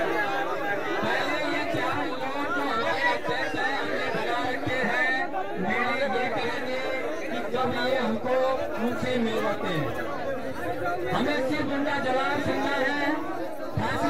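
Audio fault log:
Throughout: DC offset. The whole waveform sits shifted off the zero line by a constant of about -34 dBFS, so it is not heard as a sound. It eats a little headroom on one side, and a spectrogram shows a steady band at 0 Hz.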